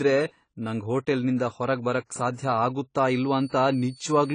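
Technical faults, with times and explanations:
Throughout, AAC compression: plainly audible codec damage with nothing above 10 kHz, likely from AAC-LC at a low bitrate, which fits about 24 kbps. Coarse quantisation and a lowered cut-off leave a spectrogram with a hard ceiling at 10 kHz and patchy gaps below it.
2.35 to 2.38 s, pre-echo: just after "ನಂಗ್ ಹೋಟೆಲ್ನಿಂದ ಹೊರಗ್ ಬರಕ್", codec noise spreads 36 ms ahead of an attack. The noise sized for the loud onset fills the whole transform block. The spectrogram shows a broadband smear before the onset, and the waveform shows low-level fuzz before the jump.
3.07 s to the end, switching supply whistle: a high tone between 4.46 and 4.53 kHz, roughly 30 dB below the speech, comes from a switching supply running in an audible burst mode or beating with another supply. The spectrogram shows a thin horizontal line that stays within that narrow band.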